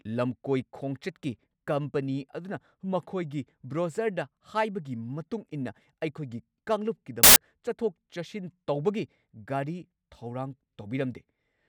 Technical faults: samples built from the wrong bytes

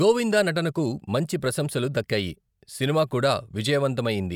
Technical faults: none

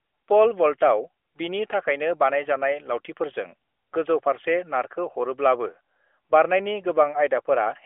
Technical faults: none

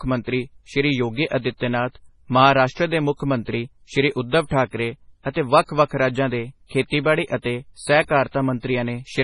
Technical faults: MP3 compression

